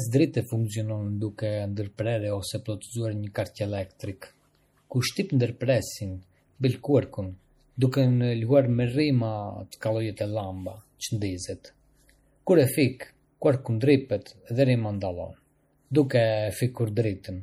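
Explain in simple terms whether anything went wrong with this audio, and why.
Heavy data squeezing, most likely MP3 compression, damaged this speech throughout. To save space, the encoder keeps only the parts of the sound it expects you to notice, cuts off the highest treble and drops fainter detail, which then flickers in and out from moment to moment. You hear that clearly across the whole recording: a dull, watery, slightly swirly quality, with hissy sounds turning metallic and sharp starts blurring.

At about 9.71 s there is also pre-echo, a side effect of that compression. The encoder works in short chunks and spreads its noise evenly across each one. Here a sudden, loud onset came late in a chunk, so noise meant to be hidden under the loud part leaked into the quiet instant just before it. You hear a brief hiss, about 13 ms long, arriving before the attack, which then sounds softened.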